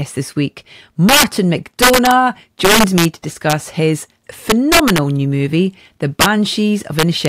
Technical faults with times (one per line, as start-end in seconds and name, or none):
1.09-1.24 integer overflow
1.82-2.11 integer overflow
2.65-3.05 integer overflow
3.50-3.53 integer overflow
4.50-4.98 integer overflow
6.21-6.26 integer overflow
6.99-7.28 integer overflow